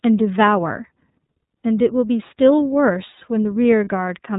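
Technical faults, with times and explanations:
Throughout: iLBC codec. The speech is band-limited with nothing above 4 kHz and has a plainly audible rough, slightly synthetic texture. Each frame's excitation is coded independently at a low rate, which fits the 30 ms frame, 13.33 kbps mode.
3.84 to 3.88 s: lost iLBC frame. The sound briefly turns into a held, faintly buzzy vowel-like tone. The decoder filled one missing 30 ms frame by repeating the last pitch cycle with added noise, and the speech recovers immediately because each frame decodes independently.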